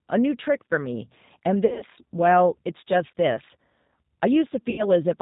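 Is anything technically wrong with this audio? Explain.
Yes. The G.729 codec is audible throughout the speech. At 8 kbit/s it rebuilds each 10 ms frame from a vocal tract filter, a pitch predictor and a few pulses, and cuts everything above 4 kHz, so the voice sounds band-limited, slightly rough and synthetic.

VoIP packet loss concealed by the speech codec occurs at 1.66–1.84 s and 4.70–4.85 s. The decoder stretches its last pitch and filter while lowering the gain, turning the missing audio into a fading buzzy tone or coloured noise. The first event loses about 120 ms spread over 160 ms, with the longest gap 60 ms. The second loses about 80 ms. The speech stays weak briefly after each event.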